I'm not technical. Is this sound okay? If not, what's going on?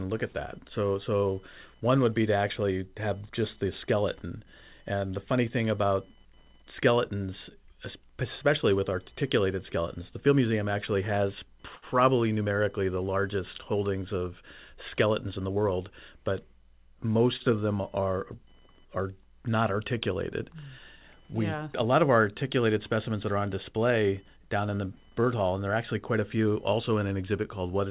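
No. A faint computer activity noise, a fine buzz pulsing around a thousand times a second, runs underneath, caused by the computer's own electrical activity leaking into the audio.

There are two short stalls from a late packet, at 11.75 s and 17.36 s. The audio briefly holds a sound, for about 70 ms and then 40 ms, while waiting for delayed data.

From 14.41 to 15.65 s, a jitter buffer speed-up plays the speech about 5% faster at the same pitch, trimming roughly 70 ms to catch up.

The dull, phone-like tone, with nothing above 4 kHz, is normal for this call connection.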